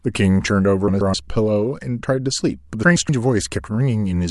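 A speech recording with a garbled, fluttering stutter from 0.88 to 1.14 s and again from 2.83 to 3.09 s. These are frames out of order: two adjacent 128 ms blocks were decoded swapped, which fits runs of four frames each, and no time is lost.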